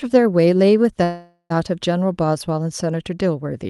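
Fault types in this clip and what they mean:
Call audio freeze: from 1.03 to 1.52 s the speech halts and its last sound stretches into a fading buzz or hiss, then 70 ms of silence, likely from packets stalling and the jitter buffer running dry. Unlike a dropout, nothing is skipped; speech resumes where it stopped.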